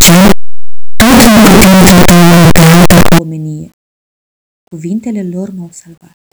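Speech, and from 0.0 to 3.19 s it is buried in a loud, harsh, buzzing distortion in which even soft sounds are as loud as strong ones, the mark of signed and unsigned mixed up. The 8-bit samples were likely read with the wrong sign convention, so the top bit flips and every zero crossing leaps across the full range. Correctly read 8-bit audio carries only faint grainy rounding noise, never this roar.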